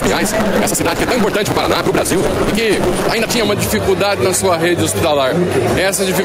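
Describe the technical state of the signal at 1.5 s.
At 1.5 s the signal sits inside a block size mismatch (truncated) running from 0.0 to 3.47 s. Each block is read short, which fits a 256-sample read, and its tail is dropped, leaving a 188 Hz buzz and audio hurried 1.88 times at roughly normal pitch, unlike a sample-rate error, which raises the pitch too.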